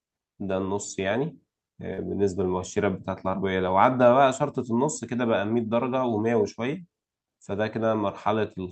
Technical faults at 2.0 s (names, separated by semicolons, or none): short concealed packet loss